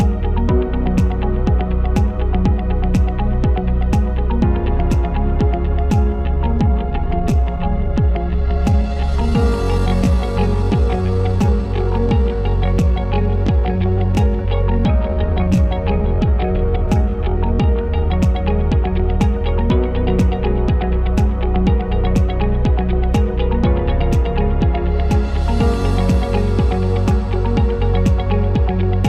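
From 5.82 s to 18.08 s the pace drops abruptly to about 0.72 times normal speed while the pitch stays where it was, before snapping back to its earlier pace at 18.08 s. This is a time-stretched section, most likely produced by software lengthening that part of the audio to fill a longer slot, holding the pitch steady by repeating short fragments.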